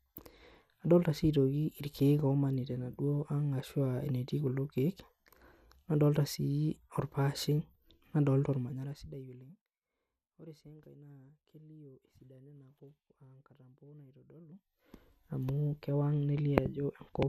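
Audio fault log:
Throughout: MP2 compression, likely from low-rate MPEG Layer II coding, which fits about 80 kbps. Nothing sounds above about 15.8 kHz, and the speech has a dull, gurgling graininess as upper sub-bands flicker off. The level stays steady, with no fader-like changes.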